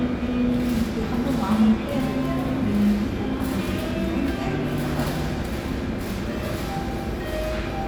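No technical faults are audible anywhere in this recording of sounds.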